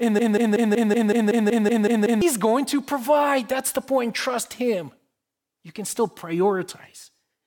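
The playback or stream has most likely stalled, resending the last fragment it held: a broken-record loop already under way at 0.0 s. A 0.19 s piece repeats back to back eleven times until 2.2 s, just before "going to provide", and the audio meant for that span is lost.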